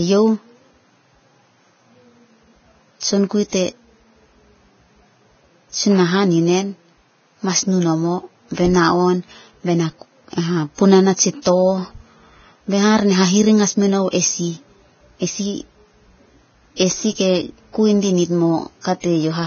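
Vorbis compression is the likely cause of the damage heard throughout this speech clip. Nothing is left above 6.5 kHz, and the treble that survives below that cut-off sounds hissy and grainy. At a very low bitrate, the kind of setting near 17 kbps would produce, the codec keeps a smooth spectral outline but quantises the fine detail so coarsely that it turns into noise. That roughens the tone of the speech and blurs its attacks.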